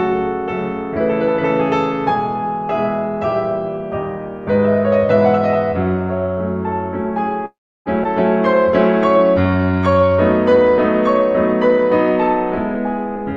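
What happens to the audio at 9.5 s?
A jitter buffer slow-down is under way from 9.18 to 10.70 s: the receiver, short of buffered audio, repeated small pitch-period slices to rebuild its reserve, adding about 174 ms. The music plays at 89% speed with unchanged pitch, sounding stretched and drawn out.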